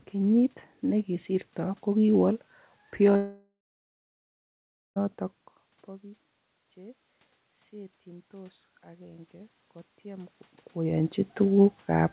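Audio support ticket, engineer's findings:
Long network dropout, 3.16–4.98 s: about 1.8 s lost. Concealment drags the last sound out as a fading buzz, then roughly 1.4 s of silence. Audio resumes with the missing stretch gone. Likely packet loss ahead of the jitter buffer.

Automatic gain rising, 7.70–10.41 s: speech and room noise swell together over about 2.7 s. Input dropped about 21 dB; AGC ramped gain up about 7 dB in response. Band-limited to 4 kHz throughout, which fits a G.711 mu-law path.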